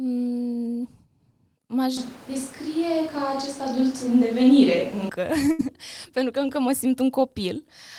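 From 1.97 s to 5.09 s the speech turns suddenly roomy and hollow, thinner in the low end, with background noise rising to roughly 25 dB below the speech, while the overall level stays about the same. At 5.09 s the close, full sound returns just as abruptly. This is most likely a switch to a distant microphone: the close microphone's feed dropped out, so a pickup further from the talker, hearing more of the room and less bass, carried the speech instead.

At 5.51 s the sound briefly freezes into a sustained, fading continuation of whatever preceded it, lasting about 74 ms, and then jumps ahead at 5.61 s with roughly 80 ms of speech gone. That is a burst of packet loss. A short run of audio packets never arrived in time, so the receiver stretched out the last sound it had, turning it down as the gap went on, and resumed once fresh packets arrived, leaving the missing stretch unheard.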